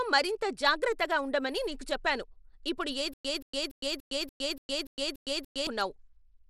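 From start to end the speech carries plainly audible Bluetooth SBC compression: a gritty, coarsely quantised texture over the sound, which fits a low bit pool around 96 kbps. A spectrogram shows a hard ceiling near 19.5 kHz with blotchy, patchy upper bands.

From 3.14 to 5.67 s a stutter with silent gaps sets in: the same 0.18 s burst returns nine times, each followed by about 110 ms of digital silence, every 289 ms. The stream likely stalled and replayed its last fragment, so the waveform shows identical blocks separated by flat lines.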